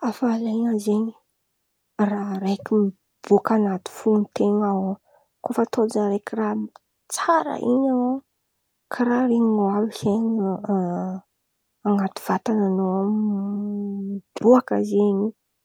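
No technical faults detected.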